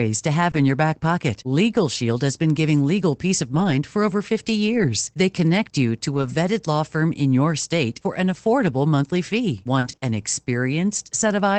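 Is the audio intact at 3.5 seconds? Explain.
No. A lost packet rebuilt from error correction runs from 3.51 to 3.73 s. Several Opus packets went missing, and the decoder filled them from low-bitrate copies carried in the following packets. There is no gap, but about 120 ms of the speech sounds rougher and noisier.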